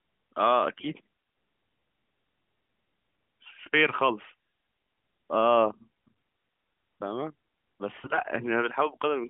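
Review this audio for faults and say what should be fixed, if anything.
Near the end of the speech, from 8.02 to 8.20 s, the voice turns hoarse, scratchy and gargly while keeping roughly its pitch and loudness. These are AMR bit errors. Over a weak link, roughly 7 percent of the less protected bits arrived flipped across eight 20 ms narrowband AMR frames. The checksum on the critical bits still passed, so the decoder accepted the frames. It then placed its excitation pulses wrongly and used slightly wrong pitch, gain and spectral values. The surrounding narrowband sound, limited to about 150 Hz to 3.4 kHz and consistent with the 12.2 kbps mode, carries only light coding damage. To prevent this, give the radio link more error protection or switch to a lower AMR mode with stronger channel coding when signal quality drops.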